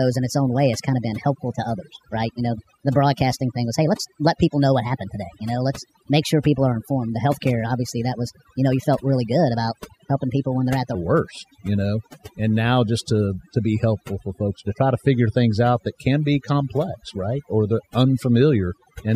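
From 0 to 10.95 s the speech runs at 1.26 times its proper rate, so it sounds hurried and about four semitones high: a section at the wrong speed, likely from playback against a mismatched clock. On a spectrogram, harmonics sit higher and wider apart, dropping back at 10.95 s.

Across the whole clip, overdone noise removal leaves the background broken into twinkling, warbling specks. Bands near the estimated noise floor were pulled down or cut, so a spectrogram shows scattered isolated blotches between dark gaps.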